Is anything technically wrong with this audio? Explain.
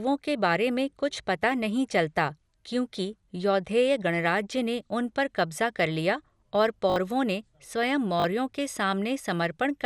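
Yes, there are two faults.

Throughout the speech, the sound is dull, with nothing above 14.4 kHz and a plainly audible gurgling, granular texture. This is likely MP2 compression at a low bitrate, around 80 kbps. Too few bits switch off the upper sub-bands and leave the remaining bands coarsely quantised.

A repeated buffer occurs at 6.9–6.96 s, after "कब्ज़ा कर लिया और" and before "ने स्वयं", and again at 8.2–8.24 s, just after "ने स्वयं". When fresh audio arrived late, the last chunk, consistent with a 20 ms buffer, replayed three and then two extra times. Each repeat is a stuttering buzz with hard joins, and roughly 70 ms and 40 ms of audio are lost.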